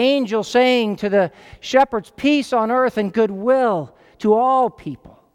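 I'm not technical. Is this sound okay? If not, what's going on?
Yes, no technical faults in this speech recording.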